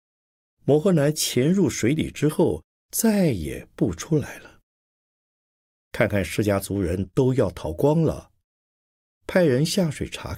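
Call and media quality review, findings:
No faults found in the speech recording. Nothing to attribute to any component in the call or media path.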